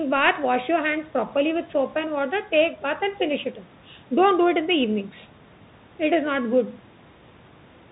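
From start to finish the speech has the sound of a Bluetooth CVSD headset codec, which fits a 64 kbps link. Each sample is just one up-or-down bit with an adapting step, so nothing passes above 4 kHz, loud high sounds outrun the step and distort, s sounds come out scratchy, and a granular hiss sits underneath.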